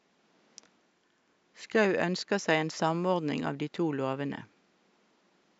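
No technical faults are audible.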